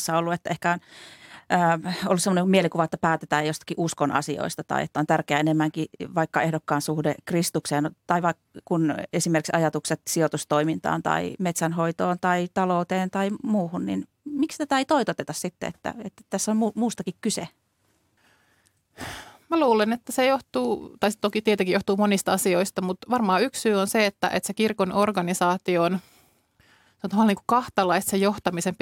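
No technical faults are audible anywhere in this speech recording.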